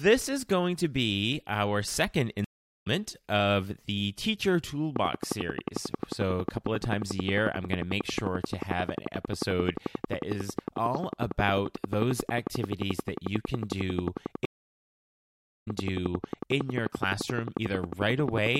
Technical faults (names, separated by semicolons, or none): stream reconnect; train of clicks